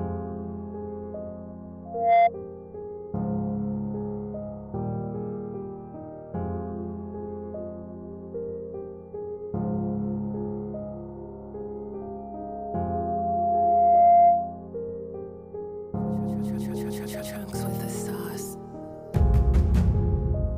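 At 1.85 s a loudspeaker feedback squeal starts. A steady 694 Hz tone swells within a fraction of a second, stopping at 2.3 s. It returns from 12.01 to 14.68 s, climbing over about two seconds. Both times it peaks roughly 15 dB above the audio. The microphone is catching its own loudspeaker, and the loop runs away at that one frequency.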